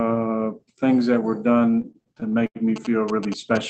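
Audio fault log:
1.59–2.57 s, repeated stalls (stutter): over this stretch the audio halts and restarts thirteen times, the longest hold lasting about 89 ms, so roughly a quarter of the span is filler. Late packets kept draining the jitter buffer, and each time the receiver stretched the last sound until data caught up. Nothing is lost, but the flow drags and judders. A spectrogram shows short smeared, flat-topped patches repeating the preceding spectrum; the waveform shows repeated cycles and fades in the longer holds.
2.76–3.70 s, GSM signalling bursts: a galloping dit-dit-dit of brief buzzes sits about 10 dB below the sound, running to the end. A nearby 2G phone was exchanging short groups of signalling bursts, and the audio circuitry rectified the radio energy into an audible pulse train repeating at 217 Hz. On a spectrogram this appears as clustered vertical striations with a comb of harmonics spaced at 217 Hz; the waveform shows sharp, evenly spaced spikes grouped in clumps.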